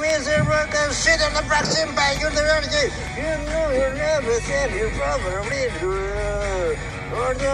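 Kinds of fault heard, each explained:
No faults can be heard anywhere in this audio.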